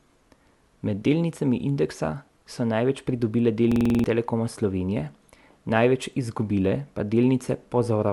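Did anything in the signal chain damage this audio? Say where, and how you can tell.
Yes, a system hang loop at the driver buffer stage. From 3.72 to 4.04 s, one 46 ms slice repeats seven times. Hardware kept replaying a stalled buffer.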